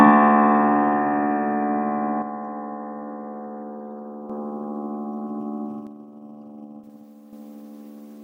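A clip of sounds has one channel that likely drops out twice, from 2.22 to 4.30 s and again from 5.87 to 7.33 s. Once the two channels are summed to mono, material shared by both sides falls abruptly by about 6 dB at each onset and jumps back at each end.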